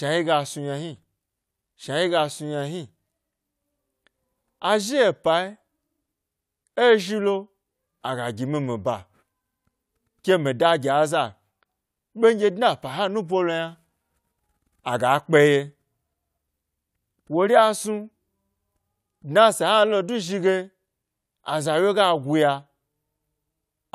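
No technical faults are audible.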